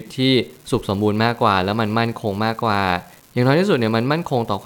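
Throughout the speech, an unreliable data bit flips randomly, adding equal spikes of about -28 dBFS: a steady crackle through pauses, seen as scattered waveform ticks and broadband spectrogram speckle.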